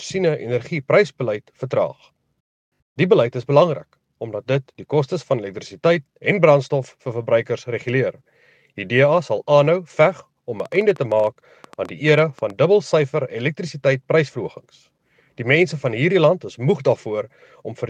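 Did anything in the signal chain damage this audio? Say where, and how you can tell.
Yes. From 10.6 s to 12.51 s there is a train of clicks: around twenty near-identical pulses at roughly 10 per second, unevenly spaced, peaking about level with the audio itself. The likely cause is interference pickup in the analogue wiring or a struggling converter interface.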